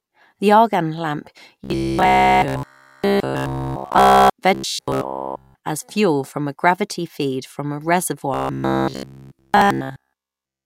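From 1.64 to 4.30 s, 4.55 to 5.55 s and 8.34 to 10.65 s, the speech turns into a rigid metallic buzz at about 66.7 Hz. This is robotic sound from repeated short buffers. A roughly 15 ms chunk was likely looped throughout while the real audio was skipped.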